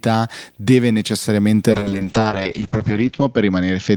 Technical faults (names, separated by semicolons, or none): video or display buzz; call bitrate drop